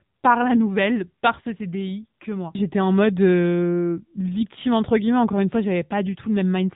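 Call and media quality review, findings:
AMR narrowband mobile codec, whole clip. Speech band-limited, nothing above 3.8 kHz; spectrogram shows a hard flat ceiling with empty space above. Plainly audible coding damage from a pitch-predicted, pulse-excited vocal tract model, consistent with the 7.95 kbps AMR-NB mode. Probable component: mobile leg transcoding.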